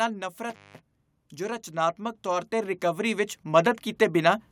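At 0.50 s an intermittent contact interrupts the speech until 0.80 s: a loose plug or cable connection breaks, leaving the line open for about 190 ms. The signal drops out with crackle at both edges, and faint hiss fills the gap.

From 1.71 s to 4.47 s, automatic gain rising is audible. The gain control judged the input too quiet and lifted its gain gradually, by about 11 dB. Voice and background noise swell together over those few seconds rather than jumping.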